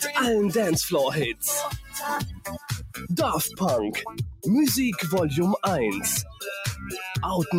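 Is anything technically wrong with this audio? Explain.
Yes. A noise suppressor meant for speech has been left running on this sound. It reads the sustained material as noise, so level swings by around 10 dB throughout, with attacks getting through and held parts sinking, giving a pumping, thinning feel.

There are also spots where the suppressor cuts the sound further: 1.76 to 1.97 s (down about 12 dB), 2.22 to 3.11 s (about 14 dB), 4.06 to 4.46 s (about 14 dB), 6.24 to 6.43 s (about 11 dB) and 6.75 to 6.92 s (about 6 dB). Each time the sustained part ducks away or its tail gets chopped short.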